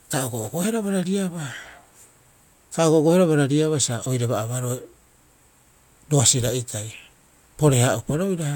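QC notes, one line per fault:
No fault found.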